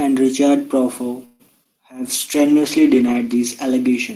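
At 1.25 s the speech stalls until 1.42 s. This is a call audio freeze, likely from packets held up in transit. The receiver stretches the last sound into a fading buzz or hiss for about 141 ms. Then the speech resumes where it stopped, with nothing lost.

Two short concealed packet losses follow, from 1.48 to 1.50 s and from 1.64 to 1.67 s. Each time about 20 ms of audio never arrived. The decoder extended the previous sound and blended back, leaving a brief smear or wobble.

From 2.04 s to the end comes a call bitrate drop. The encoder falls from 32 to 15 kbps and stays at its lowest for about 1.08 s. Coarser coding makes the speech rougher and more watery, with duller highs.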